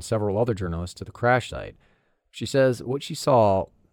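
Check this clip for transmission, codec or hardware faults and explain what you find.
Nothing in this speech recording points to a fault. There is no event anywhere in it that needs explaining.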